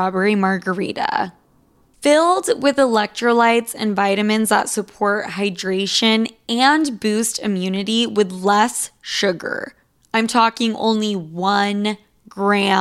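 No audible technical faults.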